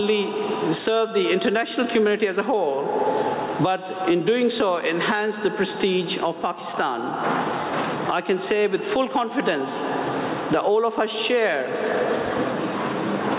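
Gain pumping runs through the whole clip. The gain ducks under each loud sound, swinging by about 15 dB. Levels sound squashed together. The likely cause is input gain set far too high, with a fast limiter clamping down. Nothing sounds above 4 kHz, which fits a narrowband call codec such as G.711.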